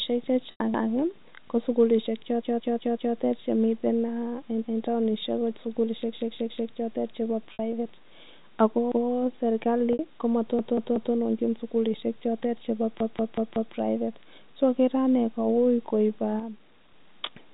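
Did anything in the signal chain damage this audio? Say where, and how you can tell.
Yes. Packet loss with pitch repetition occurs at 0.51 s (about 90 ms), at 7.53 s just after "ko sukilishek chotet chepo" (60 ms), and at 9.93 s (60 ms). This is a network-stage fault. Each gap is bridged as the receiver loops the last pitch period and fades it. The lengths fit a few lost packets per gap. The audio sits inside a telephone band cut off at 4 kHz.

A repeated buffer, a driver or buffer-stage fault, shows up as a stutter with hard joins at 0.74–0.93 s (one extra play), 2.42–3.16 s (four), 6.13–6.69 s between "eng taonishek ko sukilishek" and "chotet chepo" (three), 8.92–9.10 s (one), 10.59–11.15 s (three), and 13.00–13.75 s after "sukilishek chotet chepo" (four). Each repeated piece lasts about 186 ms, which fits an 8192-sample buffer replayed when new audio arrived late. Essentially nothing is skipped. 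The repeats only stretch time.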